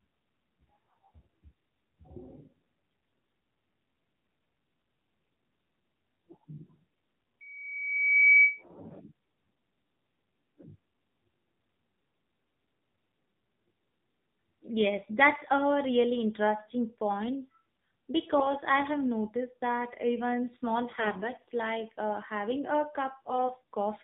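Throughout, the speech passes through an AMR narrowband mobile codec at what sounds like a low rate near 7.4 kbps, cutting everything above 4 kHz and leaving the voice plainly buzzy and synthetic.

From 7.40 to 8.63 s, a loudspeaker feedback squeal appears as the microphone picks up its own loudspeaker. A 2.3 kHz tone swells over about a second to roughly 10 dB above the speech.

AMR bit errors strike at 18.38 to 18.47 s, 20.92 to 21.31 s and 23.29 to 23.53 s. Flipped bits misplace the excitation pulses and skew the finer pitch and gain values, so the voice turns briefly hoarse, scratchy and gargly while keeping its pitch and level.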